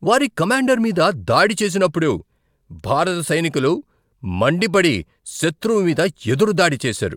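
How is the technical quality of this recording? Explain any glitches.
The speech recording has no audible technical glitches, with the signal holding steady and intact throughout.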